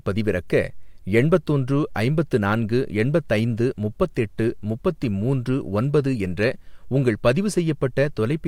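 No faults were found anywhere in the recording.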